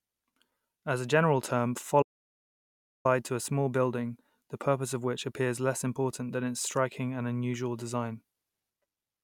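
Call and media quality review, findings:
Audio dropout to silence, 2.03–3.05 s. Input path lost for about 1.02 s, likely a device disconnect, failed link or stray mute upstream of the encoder, which kept writing silence. Speech cuts off abruptly mid-flow and resumes just as abruptly. Gap is dead silence with no room tone or noise floor. Whatever was spoken in that second is unrecoverable.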